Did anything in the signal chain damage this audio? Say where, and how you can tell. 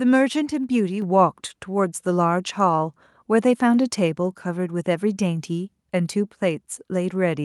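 Yes. At 1.02 s the whole signal, speech and background alike, jumps up by about 4 dB in a single step and stays at the new level. Because the room noise rises along with the speech, this is a level change applied at the input rather than something the talker did. It points to call processing: the microphone volume stepped up when the call software judged the input too quiet and raised the device's input gain in one increment instead of ramping it smoothly.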